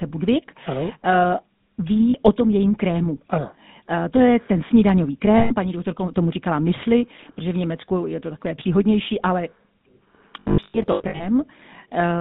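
Throughout the clip the speech carries GSM full-rate codec damage, plainly audible as a buzzy, gravelly roughness. The codec rebuilds the voice from a vocal-tract model driven by regular pulses, discarding most excitation detail, and the result fits a 13 kbps GSM full-rate stream. The line band runs from about 150 Hz to 3.7 kHz, so the sound is thin at the bottom and has no air above that.

Lost GSM frames break in at three points. The decoder fills each gap by repeating the last good frame, which comes out as a rough metallic ring. From 2.10 to 2.16 s, a 40 ms hold (about two frames) sits just before "o tom jejím krému". From 5.38 to 5.55 s, a 120 ms ring falls between "to je ten snídaňový" and "paní doktorka tomu říkala". From 10.4 to 11.26 s, losses totalling 500 ms are scattered across 800 ms, with the longest run around a tenth of a second. This produces a choppy, repeatedly ringing stretch.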